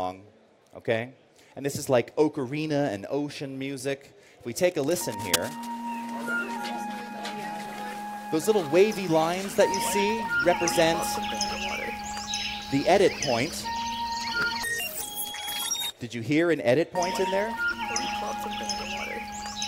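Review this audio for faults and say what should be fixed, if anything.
From 4.67 to 5.69 s there's a burst of cable scratch noise, about a second of dense, ragged scratching and rustling sitting only a little below the sound itself. The likely culprit is a worn cable, connector or control being moved, so its contact resistance jumps around and dumps those uneven noise bursts straight into the signal. That stretch wants repairing or replacing. To prevent it, swap out or clean the tired lead and connectors and keep them still while recording.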